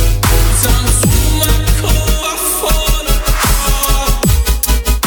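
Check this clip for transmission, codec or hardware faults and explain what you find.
One hardware fault is present: mains hum from the start to 2.08 s. A ground loop or a nearby transformer is letting the 50 Hz power supply leak into the signal path, so a steady low tone sits under the sound at roughly 5 dB below it, then stops. Unlike rumble or handling noise, which wander and spread across the low end, this is a fixed, pitched drone locked to the mains frequency.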